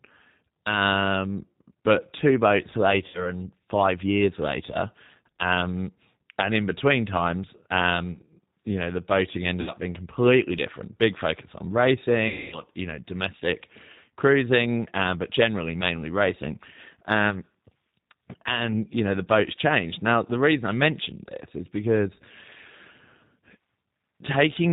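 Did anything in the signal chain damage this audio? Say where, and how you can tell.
Yes. At the codec stage, the G.729 codec runs throughout at 8 kbit/s. Nothing gets through above 4 kHz, and the speech sounds rough and a bit synthetic.

On the network, VoIP packet loss concealed by the speech codec shows up at 3.08–3.33 s (after "but two boats"), 9.61–9.73 s and 12.28–12.62 s. The decoder stretched its last frame into fading buzz or noise, for about 60 ms, 60 ms and 240 ms.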